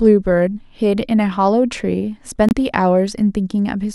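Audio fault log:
2.49–2.53 s, corrupt frame muted: the speech drops to dead silence for about 44 ms, with a hard edge on the way in rather than any fade. What's happened is that a compressed frame arrived with flipped bits, the decoder threw it out, and the player dropped in silence to fill the slot. The gap length fits a single lost frame, and since silence takes the frame's place, everything after it stays on time.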